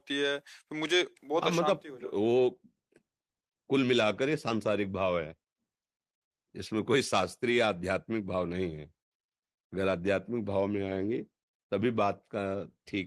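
No technical faults can be heard anywhere in this speech recording. There is nothing to mark at any point in time.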